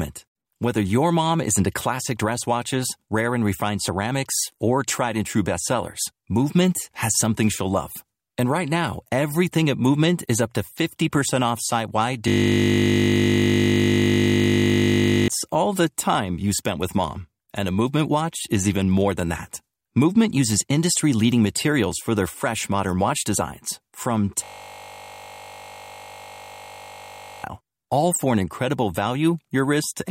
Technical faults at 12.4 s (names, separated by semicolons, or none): system hang loop